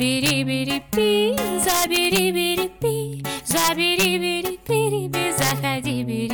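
The audio has integer overflow cracks at 0.26–0.30 s, 0.93 s, 1.38–2.19 s, 3.51–4.05 s and 5.42–5.51 s. Peaks about 1 to 4 dB over full scale wrap to the opposite sign instead of limiting.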